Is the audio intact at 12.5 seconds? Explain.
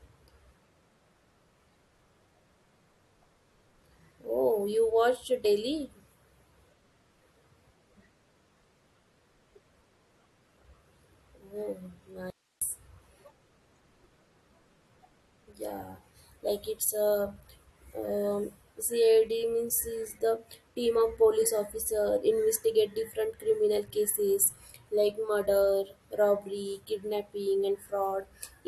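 No. At 12.5 s the speech sits inside an audio dropout to a faint residue running from 12.30 to 12.62 s, about 0.31 s. The signal cuts out abruptly mid-flow, and the gap holds only hiss, roughly 45 dB below the normal level, before the speech returns just as suddenly. The likely cause is a brief loss of the feed upstream while the rest of the chain stayed live, so its noise floor kept passing through.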